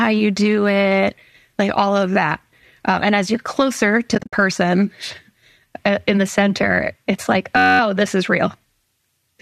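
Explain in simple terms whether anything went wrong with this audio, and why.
Two things go wrong here, and both are brief.

From 4.15 to 4.33 s there's AAC frame loss with muting. Chunks of the compressed stream went missing, about 130 ms' worth scattered across 180 ms, with the longest gap around 70 ms. The decoder filled each missing chunk with silence, and because the frames overlap, the sound fades out and back in instead of cutting off sharply. You hear a few soft dropouts in a row.

Then from 7.57 to 7.80 s, right after "the center it's like" and just before "this is real", there's a system hang loop. The computer briefly froze while the sound hardware kept replaying the same tiny slice of audio, about 10.7 ms long, 21 times over. That repeats at roughly 94 times a second, so it comes across as a short buzzy drone rather than a stutter. The slice length fits a 512-sample buffer. 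Nothing is actually skipped; the sound picks up where it left off.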